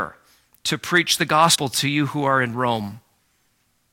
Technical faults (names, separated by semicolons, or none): compressed frames skipped